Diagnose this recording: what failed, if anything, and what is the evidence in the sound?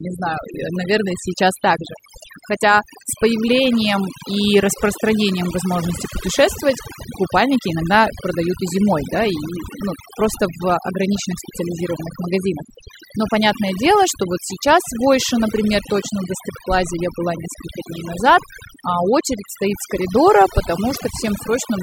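A noise suppressor in the call-processing chain was driven far too hard and damages the speech for the whole recording. Each frequency band that sits close to its noise estimate is pulled down or switched off. The quieter parts of the voice fall under that threshold and are removed along with the noise. Between phrases the background drops, broken by twinkling specks of leftover noise. These are the marks of overdone noise removal.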